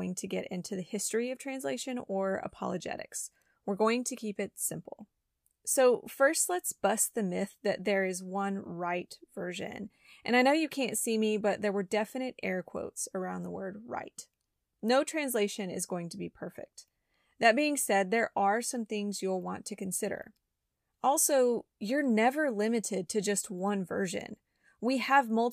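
No technical faults are audible anywhere in the speech recording.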